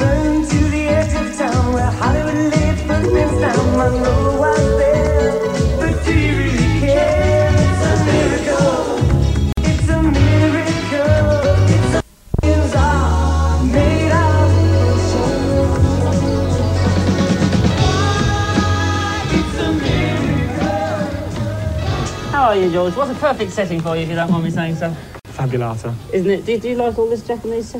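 Separately encoded pieces were joined without trimming encoder delay and padding, leaving a gap at each join: about 50 ms at 9.52 s and 52 ms at 25.2 s. Each cuts the sound with smeared edges before it resumes where it stopped.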